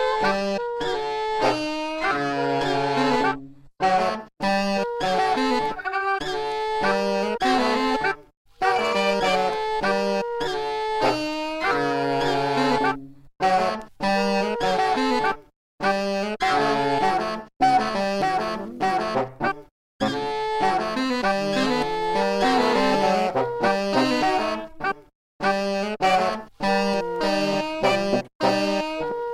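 From 0.0 to 4.0 s the audio plays as an adaptive stream starting at a low bitrate, consistent with HE-AAC at 16 kbit/s. Treble is thin and synthetic with nothing above 12.3 kHz, and artefacts are heavier. At 4.0 s quality jumps, without a gap, to what fits AAC-LC at 96 kbit/s.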